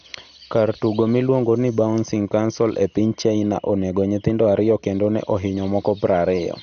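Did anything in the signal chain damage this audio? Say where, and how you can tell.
Yes. The damage sits at the codec stage, throughout the speech. Nothing is present above 6.5 kHz, so it sounds dull, with a gurgling, granular edge. That points to MP2 compression, likely at a low rate near 48 kbps. Upper sub-bands lose their bits, switch off, and coarsely quantise what remains.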